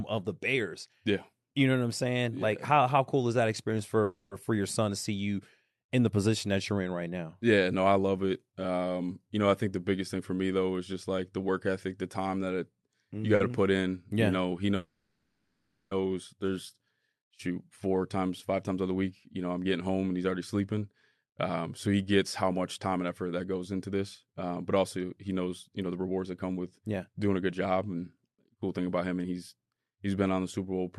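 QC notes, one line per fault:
4.03–4.34 s and 14.76–15.94 s, call audio freeze: at the first point the last sound is carried on for about 280 ms as a decaying buzz or hiss. At the second, just after "know he", about 1.15 s is filled the same way and trails to roughly 20 ms of silence. In both cases the audio then resumes from where it stopped, with nothing lost. The likely cause is packets held up in transit that drained the jitter buffer, so the receiver padded the wait and the playout delay grew by the length of the gap.
13.35 s, short stall from a late packet: between "you got" and "to put in" the sound is held about 50 ms too long, with a slight buzz or dip. One packet arrived after its playout time, the buffer ran dry, and the receiver stretched the previous sound until the packet came in, then continued from the same place. Nothing is missing; the pause adds 50 ms of delay.
17.50–29.25 s, jitter buffer speed-up: the sound runs at about 110% speed with unchanged pitch and comes across as hurried, ending just before "he's he's". 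After the earlier stalls the buffer held more audio than its target, so the receiver removed many pitch-period-length slices in succession. Roughly a second is cut in total, bringing latency back down. The call codec's band limit, a cutoff near 12 kHz, stays in place across this stretch.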